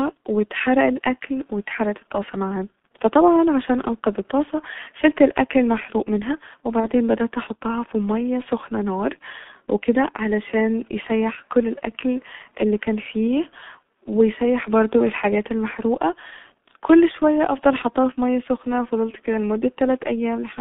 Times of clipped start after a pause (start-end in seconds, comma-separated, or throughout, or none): none